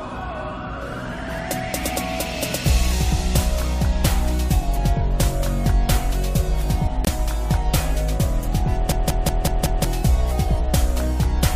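At 7.05 s the audio drops abruptly into silence for about 40 ms, returning at 7.09 s. This is a corrupt frame muted. A single compressed frame arrived with damaged bits, the decoder rejected it, and the player substituted silence for that frame's duration. The gap's hard edges and its length of one frame are what set it apart from a natural pause.

From 8.92 s to 9.85 s a short fragment repeats exactly, five times in a row, giving a mechanical stutter at about 5.4 repetitions per second. This is a system hang loop. The host or driver stalled while the audio hardware kept replaying the same ring buffer. Each cycle lasts about 186 ms, which fits an 8192-sample buffer, and around a second of the real audio is missing from this stretch.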